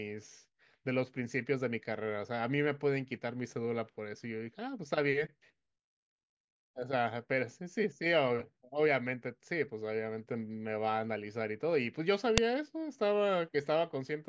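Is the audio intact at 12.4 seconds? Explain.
No. At 12.38 s there is a file header played as audio: a sharp, loud click lasting only a couple of milliseconds. It marks a join where another WAV segment was attached without its header being stripped. The few dozen bytes of header data, meant to describe the file, were read as sample values instead. Because those bytes bear no relation to the surrounding speech, they produce an abrupt snap regardless of what the signal is doing.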